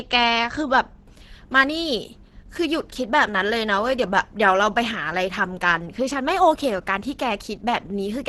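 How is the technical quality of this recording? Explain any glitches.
The technical quality is poor: heavy Opus compression runs through the whole recording. The damage points to a very low bitrate, around 12 kbps, which would push the encoder into its hybrid mode, a speech coder underneath with a band-filling layer on top. Nothing survives above 12.1 kHz, so the top end is cut away. The speech sounds muffled and hoarse, with a rough, grainy texture on sustained sounds where bands are filled by approximation rather than coded exactly.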